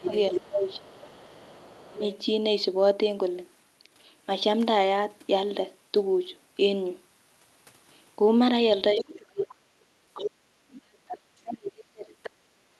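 From 0.0 to 2.18 s, the other side's voice is leaking through: a faint second voice, about 25 dB below the talker, sits under the speech. This is likely loudspeaker playback picked up by the microphone that the echo canceller failed to remove completely.

Overlapping that, from 0.05 to 2.03 s, speech is suppressed in double talk. For roughly a second in total, the talker's level dips in patches, by up to about 25 dB. With both sides talking at once, the likely cause is an echo canceller that could not tell the talker from the echo and turned everything down together.

A second suppression runs from 8.94 to 9.54 s and is deeper, up to about 35 dB. From 8.99 to 10.31 s the leaked voice returns much more clearly, only about 10 dB below the talker.

From 10.47 s to the end of the clip, the suppression is at its strongest, cutting the speech by up to about 40 dB. A brief scrap of the other side leaks through at 12.23 to 12.3 s, about 15 dB down. 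This band-limited call audio cuts off around 12 kHz.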